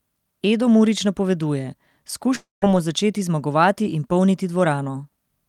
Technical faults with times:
2.35-2.63 long network dropout

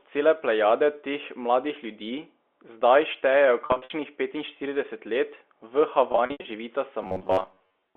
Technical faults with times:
3.66-3.90 packet loss with pitch repetition
6.12-6.44 packet loss with pitch repetition
7.03-7.96 robotic sound from repeated short buffers

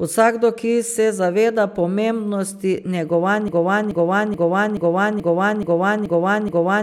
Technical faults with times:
3.48-6.83 broken-record loop

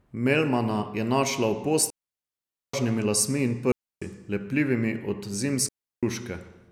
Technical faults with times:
1.90-2.74 digital wireless dropout
3.72-4.02 digital wireless dropout
5.69-6.03 digital wireless dropout

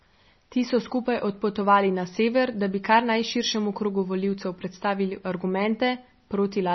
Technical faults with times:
0.00-6.75 MP3 compression

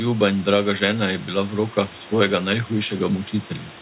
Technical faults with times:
none

